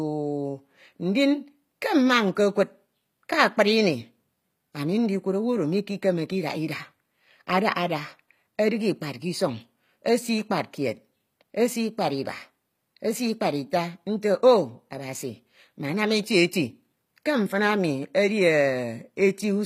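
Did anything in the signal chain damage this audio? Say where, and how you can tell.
Yes, at the codec stage: the speech was likely squeezed through HE-AAC compression at a low rate, fitting roughly 24 kbps. Throughout, the treble is rebuilt from copied lower bands, so s sounds turn gritty and lispy, with nothing above 15.5 kHz.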